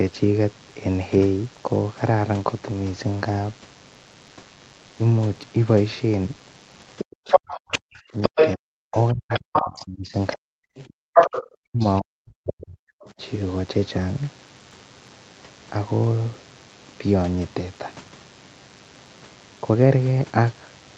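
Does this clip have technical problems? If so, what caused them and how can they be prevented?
Yes, there are four separate problems here.

DECT cordless phone buzz runs through the whole clip: a thin, steady 100 Hz buzz with a stack of harmonics, sitting about 30 dB under the speech. A nearby DECT handset or base fires a radio burst every 10 ms, and something in the audio chain rectifies it into the signal. To prevent it, move the DECT base well away from the mic, interface and cables, or use shielded cabling.

The other side's voice leaking through shows up from 6.98 to 12.01 s, and it's strong, roughly 5 dB louder than the talker. There's a brief second scrap from 13.05 to 13.12 s, this one around 30 dB down. The far end is playing out of a loudspeaker into the mic, and the echo canceller is likely failing to subtract it all. The fix is to get the talker on a headset so there's no loudspeaker feeding the mic.

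Speech suppressed in double talk hits while both sides are talking, from 7.32 to 10.54 s and again from 11.62 to 13.21 s. The talker's voice dips or chops out, dropping by as much as about 40 dB, for roughly two seconds in the first stretch and about one second in the second. The likely cause is an echo canceller that can't tell the near voice from the echo, so it turns everything down. A headset fixes this one as well, since it removes the echo the canceller is fighting.

Background gated by the echo canceller is a short hole from 10.89 to 11.14 s. The room sound drops hard, by about 40 dB, for around 200 ms, then comes back when the canceller releases. It's clamping the mic while the loudspeaker plays. Again, a headset, or a less aggressive suppression setting, keeps the room tone steady. The top end stops at about 8 kHz, which fits the call path's Opus coding and isn't part of these problems.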